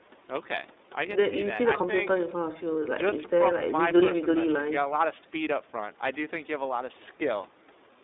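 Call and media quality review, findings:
iLBC codec, throughout: narrowband, nothing beyond roughly 250 Hz to 3.7 kHz; plainly rough, synthetic speech from independently coded 30 ms frames, which fits the 13.33 kbps mode.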